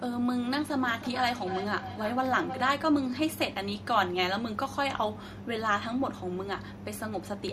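From 0.87 to 2.84 s the speech returns as feedback echo between two devices, roughly every third of a second and up to about 9 dB below the voice, each return thinner and more ringing. Unlike room reverberation, the repeats are distinct and evenly spaced, as another device's loudspeaker feeds the microphone.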